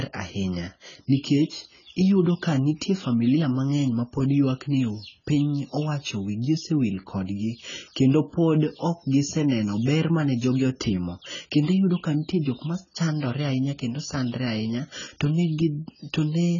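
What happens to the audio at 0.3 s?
At 0.3 s the speech already carries the AAC compression damage heard across the whole clip. Nothing is present above 7 kHz, so the sound is dull and muffled. Sibilants turn fizzy and smeared, and sustained sounds warble. The likely cause is an AAC-LC encode at a very low bitrate, something like 16 kbps. With so few bits, the coder drops high frequencies and quantises the remaining bands coarsely, leaving holes and noisy texture in the spectrum.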